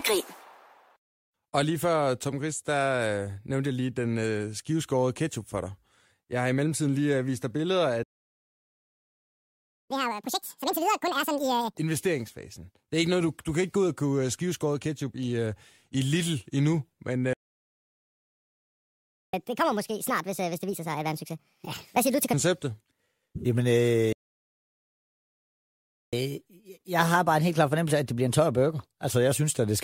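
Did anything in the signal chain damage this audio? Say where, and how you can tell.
Yes, at the playback stage. The speech drops to silence three times: 8.03 to 9.91 s (about 1.9 s), 17.33 to 19.34 s, and 24.13 to 26.13 s (2 s each). These are playback stalls. The player likely ran out of buffered data or was blocked.

Each stall is followed by catch-up at higher speed. The player resamples its backlog, raising speed and pitch together. From 9.91 to 11.77 s it runs at double speed, about ten semitones up. From 19.34 to 22.34 s it runs at 1.5 times, about seven up. From 26.13 to 29.13 s it runs at 1.1 times, slightly higher.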